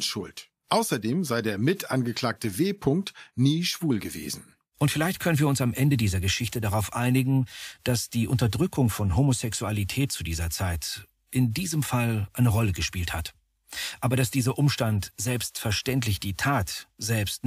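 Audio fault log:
No faults detected in this speech recording; nothing logged.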